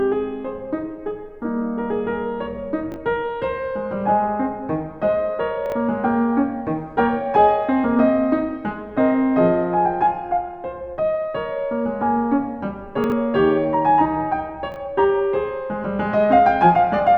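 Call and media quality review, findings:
Chunks out of order, 2.92–2.96, 5.66–5.72, 13.04–13.12, 14.72–14.76 s: 20 ms music chunk played one to three chunks late, probably in buffer reordering, causing a jumbled moment with three hard joins.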